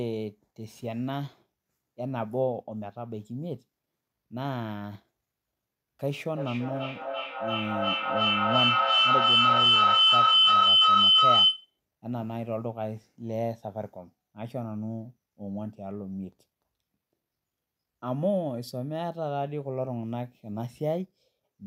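From 6.35 to 11.79 s a feedback howl builds: sound loops from loudspeaker back into microphone, gaining each trip, until a tone near 3 kHz peaks about 11 dB above the speech, with the loop repeating roughly every 0.3 s. A spectrogram shows one bright, swelling horizontal line.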